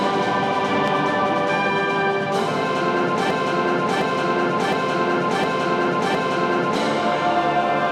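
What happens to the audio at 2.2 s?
Nothing goes wrong at 2.2 s; the audio carries on intact through that moment, with no dropout, click, distortion or other fault to be heard.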